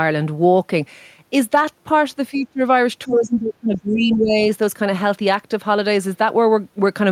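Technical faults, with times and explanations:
2.31–2.61 s and 3.04–4.37 s, speech suppressed in double talk: the speech sinks by roughly 20 dB in the first stretch and around 25 dB in the longer second one before recovering. This likely happened because both ends spoke at once. The echo canceller could not tell this talker apart from loudspeaker echo, so it attenuated everything it treated as echo, including the wanted speech.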